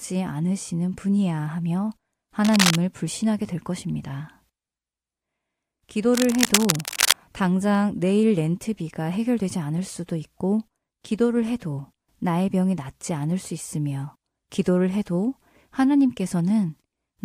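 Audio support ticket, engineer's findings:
Cable scratch noise, 2.44–2.76 s and 6.14–7.18 s: likely a worn cable or connector shifting, contact resistance fluctuating, adding dense scratchy bursts about as loud as the speech.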